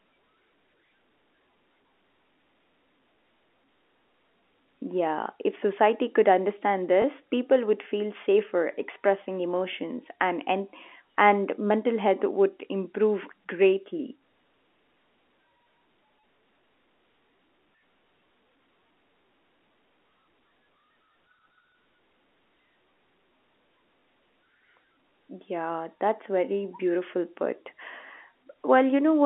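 At 7.02 s, right after "if society could understand" and before "people would feel safer", there's a small blip from packet loss with the last packet repeated. About 20 ms of audio went missing, which points to a single dropped packet, and the receiver filled the gap by replaying the previous chunk. The same thing happens again at 24.0 s, all over the narrow telephone band of the G.711 line.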